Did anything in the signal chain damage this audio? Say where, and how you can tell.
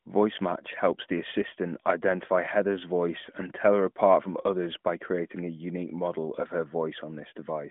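No, nothing in the signal chain stood out as damaging this audio on listening.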